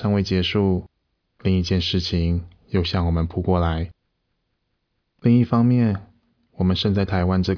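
Nothing here calls for comment, since no technical faults turn up anywhere in this speech recording.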